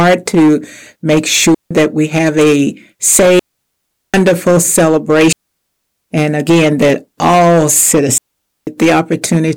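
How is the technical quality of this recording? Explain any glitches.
The recording has two clear problems: constant distortion and repeated moments where the sound vanishes.

Hard clipping runs through the whole speech clip as a harsh fuzz on every loud syllable. The signal is driven about 13 dB past what a stage can pass, so around a tenth of the waveform has its peaks sliced flat, spraying high harmonics.

Digital wireless dropouts cut the sound to clean near-silence four times, with no noise burst around them: 1.54 to 1.71 s (165 ms, between "to make" and "we have a"), 3.39 to 4.14 s (744 ms), 5.33 to 6.09 s (764 ms), and 8.18 to 8.67 s (490 ms, after "again that all"). Each time the wireless link lost too much data and the receiver muted briefly.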